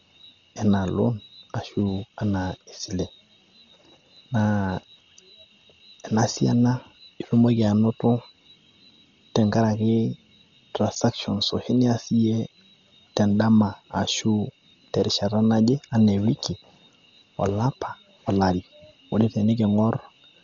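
Throughout, the speech sounds dull, with nothing above 6.9 kHz and rough, fluttering noise. Likely heavy Dolby Digital compression, filling starved frequency lines with noise.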